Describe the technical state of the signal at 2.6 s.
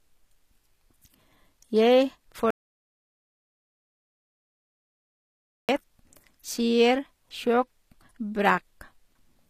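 At 2.6 s the speech has cut out completely. An audio dropout to silence runs from 2.51 s to 5.69 s, erasing about 3.2 s of sound. The break is abrupt, and the gap holds silence with no room tone or hiss. That points to the input having likely been lost while the recorder kept writing silence. On a waveform this shows as a flat line, and on a spectrogram as a fully black vertical band with hard edges on both sides.

The same moment also carries HE-AAC compression, which runs through the whole clip. It is likely the cause of plainly audible coding damage, consistent with a low bitrate around 24 kbps. The upper spectrum is rebuilt by copying lower bands upward rather than coded directly, so sibilants sound gritty and metallic where speech is present. A spectrogram shows nothing above 14.9 kHz and repetitive, smeared treble texture that does not line up with the lower harmonics.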